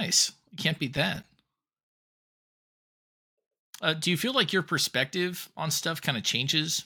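Processor overload crackle from 0.97 to 1.24 s, just after "can't beat": a handful of missed buffers, each around 5 ms, leave hard-edged silent gaps heard as gritty crackle.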